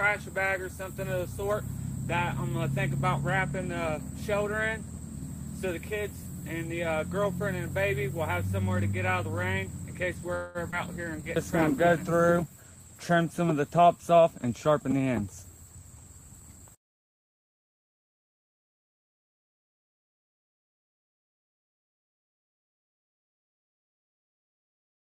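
At 10.35 s the sound stalls for about 0.19 s, the last bit carried on as a fading fill. That's a call audio freeze, likely packets held up and the jitter buffer running dry. Playback then picks up where it left off.

At 10.71 s there's a skip ahead. Roughly 70 ms of audio is dropped, and the two sides are butted together almost directly.

From 10.87 to 12.22 s comes a jitter buffer slow-down. Repeated pitch periods stretch it to 95% speed, adding 76 ms at the same pitch.

From 13.96 to 15.65 s a jitter buffer speed-up trims short pieces to run at 110%. Around 200 ms is cut, and it sounds hurried.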